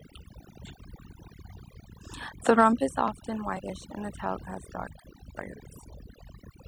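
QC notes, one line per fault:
Throughout: overdone noise removal. The noise reduction was set too aggressively, so individual frequency bands near its noise estimate are cut to almost nothing. Quiet parts of the speech go with them, and the background drops to near-silent, twinkling gaps. On a spectrogram, the background is patchy with isolated specks.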